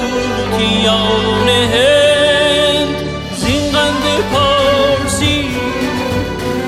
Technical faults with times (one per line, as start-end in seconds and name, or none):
5.50-6.63 periodic USB or driver dropouts